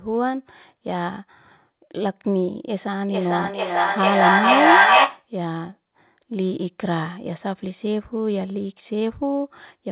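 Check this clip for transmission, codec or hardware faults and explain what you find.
One fault stands out, heard over a narrowband call path with nothing above 4 kHz: feedback echo between two devices, from 3.07 to 5.3 s. A second device plays the call aloud and its microphone sends it back, so the speech returns about every 0.4 s, thinner and ringing. The repeats build to about 8 dB above the speech instead of fading. On a spectrogram this shows as stacked, evenly spaced copies. On the waveform the envelope swells.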